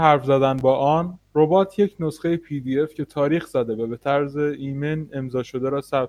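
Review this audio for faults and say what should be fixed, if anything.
A loose connector crackle occurs from 0.58 to 0.61 s, near the start of the speech. It is a short, irregular burst of scratchy noise. A worn or dirty contact in the signal path is making and breaking as it shifts. Each break chops the signal, and any DC on the line turns the reconnections into pops. Cleaning or replacing the connector and securing the cable against movement will prevent it.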